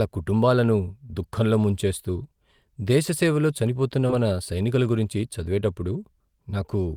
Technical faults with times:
4.07-4.11 short concealed packet loss

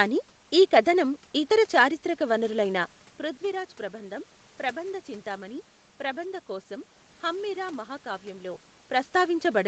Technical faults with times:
none

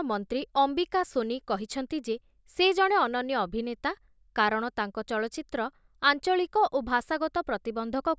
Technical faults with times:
none

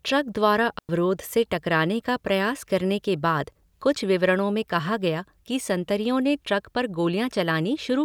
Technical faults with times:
0.79-0.89 digital wireless dropout

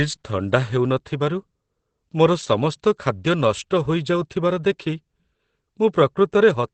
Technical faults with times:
0.00-6.74 Opus compression

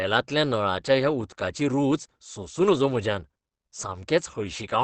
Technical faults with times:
0.00-4.83 Opus compression

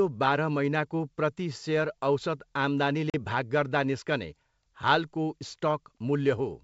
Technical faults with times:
3.10-3.15 packet loss on an ADPCM call

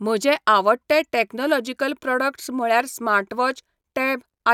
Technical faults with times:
none

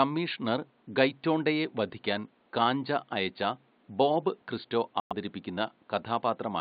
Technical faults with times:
5.00-5.12 corrupt frame muted

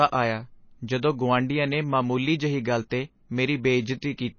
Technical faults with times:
0.00-4.38 MP3 compression
2.90 pre-echo

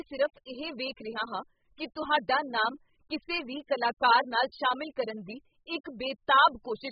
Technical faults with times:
0.00-6.91 AAC compression

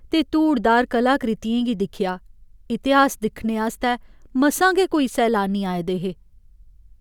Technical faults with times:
none

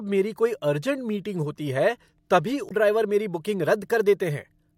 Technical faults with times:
2.68-2.71 damaged data in a compressed stream

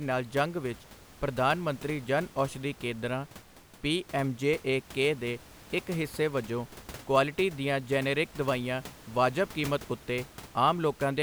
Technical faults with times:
none

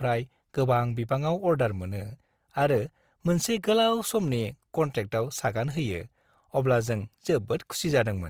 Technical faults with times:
0.00-8.29 Opus compression

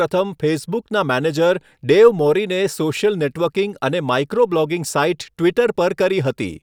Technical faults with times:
none

